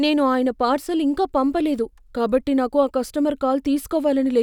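Speech, with no technical fault audible anywhere in the recording. There is nothing here that calls for a time or a cause.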